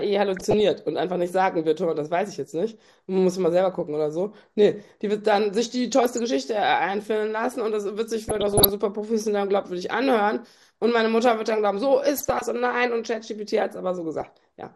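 Right from the start the whole thing has that dull, gurgly character you get from MP2 compression, the MPEG Layer II codec used on DAB. It's most likely squeezed to a rate around 80 kbps, where there aren't enough bits for all 32 sub-bands. The top bands drop out and flicker, and what's left is coarsely quantised, so the speech loses its air and picks up a grainy edge that's plainly audible the whole way through.

On top of that there are five bursts of DAB burbling, at 0.37 to 0.60 s, 6.01 to 6.19 s, 8.25 to 8.69 s, 12.17 to 12.42 s and 14.21 to 14.30 s. Each one is a short patch of burbling. That's what you hear when reception is weak and bit errors, a fraction of a percent here, slip past the error correction and scramble samples and scale factors, so individual sub-bands jump in level frame by frame. The 8.25 s burst is the longest and messiest.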